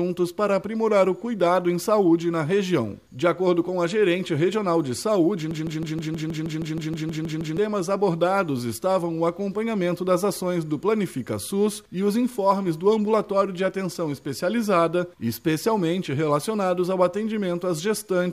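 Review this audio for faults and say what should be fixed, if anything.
There's a broken-record loop from 5.51 to 7.58 s. A 158 ms slice of sound repeats back to back 13 times, and whatever should have played there is gone. The player or stream likely stalled and kept resending the last fragment it held. To prevent it, add stall detection to the playback or streaming path so it drops out cleanly instead of re-sending old data.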